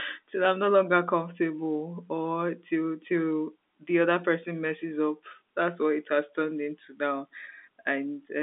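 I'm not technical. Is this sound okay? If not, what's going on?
Yes, nothing here is faulty.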